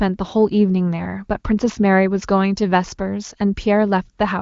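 Speech, with no technical faults to report.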